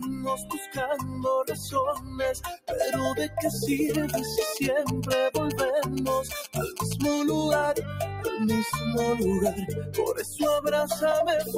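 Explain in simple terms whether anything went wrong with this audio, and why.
Throughout the clip the level keeps swelling and sinking, so held sounds thin out. A noise suppressor built for speech was applied to music or sounds and mistakes steady tones for noise.

In several spots the sound is cut by the noise suppressor: at 0.0–0.78, 0.97–1.25, 1.47–1.75, 1.94–2.2, 2.37–2.68 and 6.48–6.79 seconds, lingering parts sink or stop early.

From 3.94 to 7.02 seconds there is a galloping dit-dit-dit of short buzzes. These are GSM signalling bursts: a nearby 2G phone's radio pulses are picked up and turned into sound.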